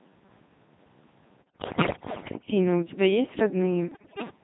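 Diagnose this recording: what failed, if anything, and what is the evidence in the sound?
The codec stage is the culprit: the whole clip has the robotic, buzzy sound of a Codec 2 vocoder, resynthesised from pitch and envelope, which fits its 2.4 kbit/s mode.

Bit errors on the digital voice radio link hit from 1.43 to 2.48 s and again from 3.92 to 4.30 s. Pitch, level and tone jump into warbles and gibberish, which points to roughly 7 to 10 percent of bits flipped.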